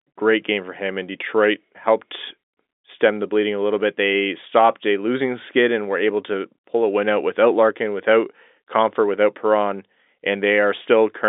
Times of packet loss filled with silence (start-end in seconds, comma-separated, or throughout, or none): none